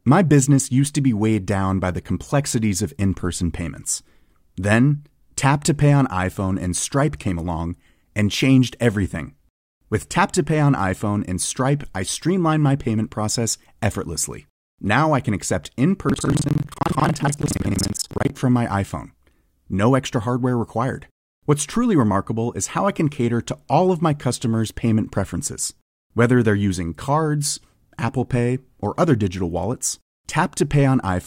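Buffer tearing runs from 16.07 to 18.33 s, between "I can accept in" and "from my": writer and playback pointer cross mid-period, so roughly half of each buffer replays audio about a fifth of a second stale, giving a 21.5 Hz rattle that fits a 2048-sample buffer.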